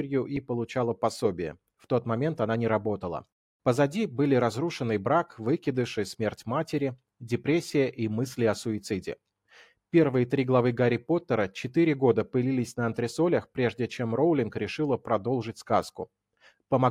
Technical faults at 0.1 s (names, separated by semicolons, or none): none